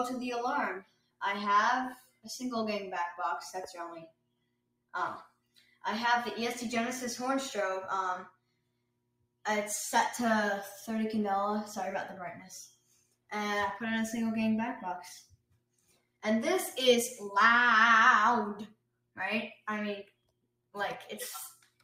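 A noise suppressor meant for speech is applied to music or sounds throughout, treating sustained material as noise and swinging gain by roughly 20 dB. The waveform pumps, and the spectrogram shows held energy fading between attacks.

Sound cut by the noise suppressor occurs at 0.80–1.21, 1.95–2.26, 4.07–5.83, 8.30–9.45, 12.68–13.31, 15.24–16.23, 18.67–20.75 and 21.55 s to the end. Sustains and tails drop by about 19–22 dB, which appears as sudden troughs in the envelope and truncated decay trails on the spectrogram.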